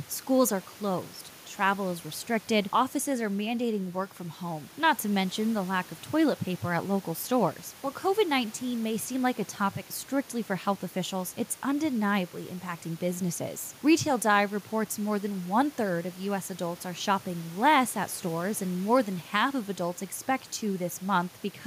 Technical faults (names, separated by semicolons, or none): none